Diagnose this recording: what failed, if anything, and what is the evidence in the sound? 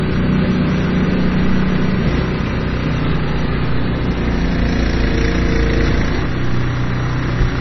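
Watery, swirly texture with smeared attacks and nothing above 5.9 kHz throughout: the codec stage, likely heavy MP3 compression at a bitrate near 24 kbps.

A faint hiss-like roughness rides louder, brighter moments throughout. That is sample clock jitter in the converter, with timing wobble under a microsecond and error roughly 55 dB down.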